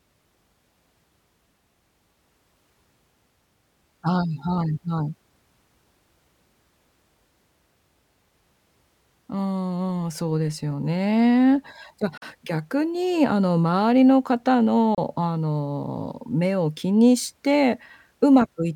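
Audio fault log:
12.17 to 12.22 s and 14.95 to 14.98 s, Bluetooth dropout: the speech cuts to silence for about 43.5 ms and then about 29 ms. It picks back up further along, as if it had kept playing through the hole, so what fell in the gap is simply gone. That pattern fits three and then two audio packets that likely didn't reach the headphones in time and were dropped.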